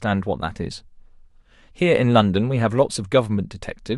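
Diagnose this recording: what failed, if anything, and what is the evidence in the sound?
Nothing in the signal chain failed: the speech signal comes out of wiring, conversion, buffering, processing, transmission, storage and playback intact, with no audible interruptions, distortions or level anomalies at any point.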